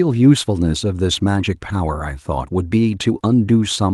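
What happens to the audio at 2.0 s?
Nothing goes wrong at 2.0 s; the speech continues intact through that moment with no dropout, click or distortion.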